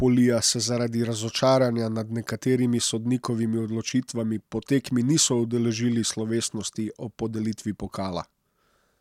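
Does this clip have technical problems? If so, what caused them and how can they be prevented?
No technical faults are audible.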